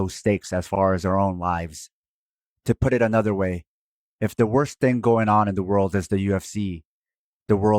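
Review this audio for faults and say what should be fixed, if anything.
At 0.75 to 0.79 s, just after "stakes as" and before "as our own lives", repeated frames cause a stutter: a 40 ms block of the speech plays twice, adding 40 ms to the clip. The length fits two 20 ms compressed frames being written or sent a second time, so the decoder plays the same slice again. Unlike an echo, the copy is exact and at full level, and unlike a dropout, nothing is missing. To prevent it, check frame sequence numbers when writing or receiving the stream and discard duplicates before decoding.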